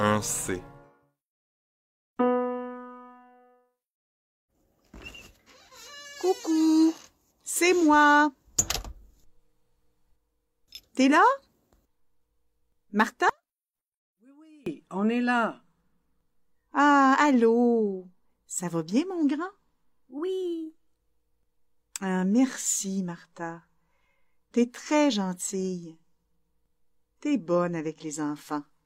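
From 13.30 to 14.66 s the audio collapses by about 32 dB, the signature of one channel inverted: one side's polarity is likely reversed, so when the two channels are summed to mono everything they share cancels. Unlike a dropout or mute, the level doesn't fall to true silence. A faint residue remains, made of only the difference between the channels, and full level returns once both channels are back in phase.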